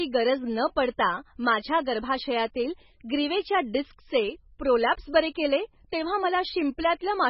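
MP3 compression damage runs through the whole of this speech clip. Nothing is left above 5.6 kHz, so the treble is cut off flat. The heavy smearing and watery texture that remain point to an encoder badly short of bits, which fits a very low bitrate of around 16 kbps. This is likely the cause: to save bits, the encoder drops the high band entirely and zeroes weak frequency lines that flicker between frames.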